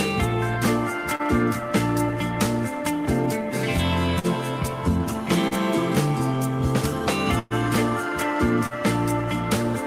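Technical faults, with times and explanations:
1.15–1.22 s, 5.48–5.54 s and 8.66–8.74 s, short concealed packet loss: about 40 ms of audio never arrived in time each time, so the receiver extended the preceding sound for 30 to 45 ms and blended back, leaving a brief smear or wobble.
4.19–4.27 s and 7.39–7.53 s, burst of packet loss: consecutive packets went missing, about 40 ms and then 120 ms, so the decoder kept continuing and fading the last sound, a held buzz or fading hiss, before jumping ahead past the lost stretch.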